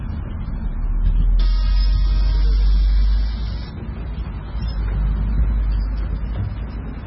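Heavy MP3 compression damage runs throughout. Nothing remains above about 5.6 kHz, so the sound is dull and boxed in. Weak frequency lines flicker on and off between frames, giving a watery, swirly texture. This likely comes from a very low bitrate, around 16 kbps.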